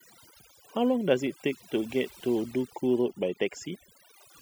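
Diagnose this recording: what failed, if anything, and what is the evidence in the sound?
A noise suppressor in the call processing stage was set far too aggressively, producing overdone noise removal across the whole speech clip. Bands near its noise estimate are cut almost to nothing, leaving a lowered background with twinkling specks and a voice whose quieter components vanish.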